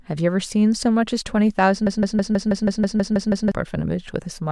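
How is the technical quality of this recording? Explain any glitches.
The recording has one clear glitch. From 1.87 to 3.52 s, a broken-record loop repeats a 0.16 s fragment exactly, ten times back to back. This likely comes from a stalled player or stream resending its last buffer. Unlike echo, the copies never decay, and the speech that should have played there is lost.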